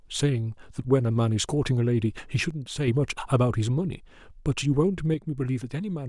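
At 2.51 s the speech drops abruptly by about 6 dB. It stays there until 2.88 s, then jumps back. From 5.14 s to the end, the same sudden drop returns. The likely cause is one channel dropping out. With one side of the stereo signal gone, the mono sum keeps only half of what both sides shared. Sound carried only in the missing channel vanishes entirely. Each step is sharp, not a fade.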